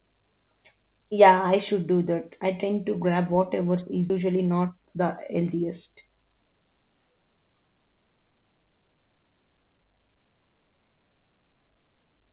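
A skip ahead at 4.1 s in this speech clip cuts out about a second of audio with no fill. That stretch was dropped on the way or by the jitter buffer while later audio was already queued, so playback jumps forward and the two sides of the gap butt together almost directly. A jitter buffer speed-up then runs from 4.20 to 6.49 s at 113% speed, with pitch unchanged. The receiver, still holding more audio than it wanted, repeatedly trimmed short pitch-period pieces, roughly a third of a second in total, so this stretch sounds hurried. Throughout, nothing is heard above 4 kHz, which fits narrowband G.711 A-law call coding.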